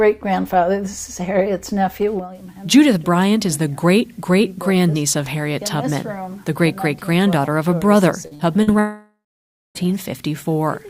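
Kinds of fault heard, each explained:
Short concealed packet loss: three brief smears or wobbles at 8.27, 8.35 and 8.63 s, each lasting about 40 ms. That much audio arrived too late to decode, so the receiver stretched the preceding sound across each gap and then blended back into the real signal.
Long network dropout: from 8.79 to 9.78 s, the sound continues as a fading buzz or hiss and then goes silent for roughly half a second. The cause is likely a stretch of nearly one second in which no audio arrived and the receiver could only extend, then mute, what it had.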